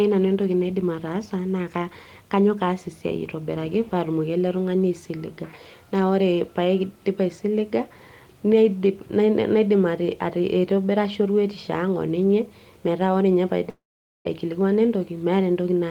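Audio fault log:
13.69–14.27 s, long network dropout: the last sound trails off as a fading buzz, then 0.46 s of near silence; 0.56 s of speech is lost, likely from packets never arriving.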